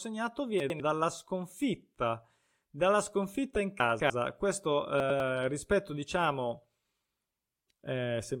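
At 0.6 to 0.8 s the speech jumbles briefly: chunks out of order, with one 100 ms chunk played a single slot late so it lands after its successor. The same happens at 5.0 to 5.2 s. At 3.8 to 4.1 s the displaced chunk trails by two slots. Nothing is missing, but each reordering leaves three hard joins, heard as a garbled, jumbled moment.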